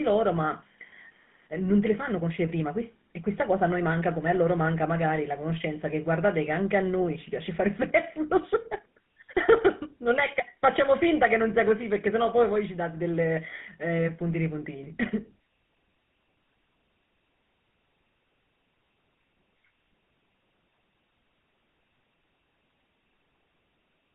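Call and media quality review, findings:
GSM full-rate codec, whole clip. Buzzy, gravelly roughness on the speech, plainly audible start to finish. Band runs roughly 150 Hz to 3.6 kHz, nothing up top. Sounds like the 13 kbps full-rate codec: vocal-tract model fed by a sparse, regularly spaced pulse excitation, hence the grit. Telephone-grade narrowband path squeezing out the highs.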